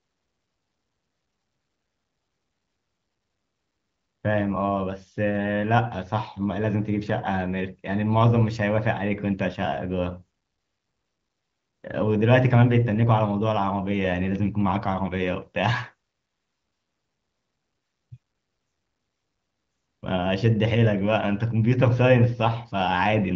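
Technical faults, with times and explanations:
Nothing stood out on listening; the speech comes through the AMR wideband (HD Voice) codec at a rate that fits about 18 kbit/s, with any coding trace faint at most and nothing above about 7.3 kHz.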